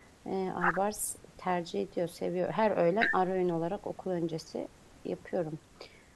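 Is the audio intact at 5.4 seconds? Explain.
Yes, the speech at 5.4 seconds plays through cleanly, with no dropout, click or other audible fault at that moment.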